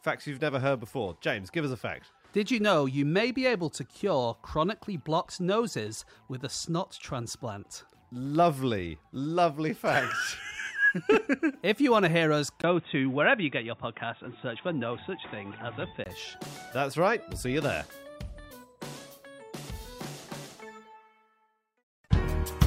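From 12.62 s to 16.06 s the audio turns boxy, with nothing above 3.8 kHz, a 20 ms gap at the switch, a new noise floor roughly 35 dB down and no real level change, likely from the input switched to a poorer device.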